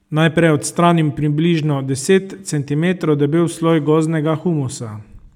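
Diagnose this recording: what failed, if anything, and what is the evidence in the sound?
Nothing in this speech recording points to a failure at any stage, so there's nothing to diagnose here.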